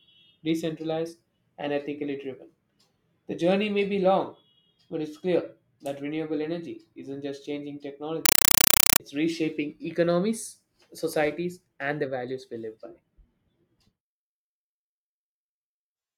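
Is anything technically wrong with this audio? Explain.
Yes. Right after "energy isn't just changing", from 8.26 to 9.00 s, the speech becomes loud, chattering static: a compressed stream played as audio, likely undecoded AC-3. Each frame plays as a 5.33 ms noise burst then silence, repeating 31.25 times a second.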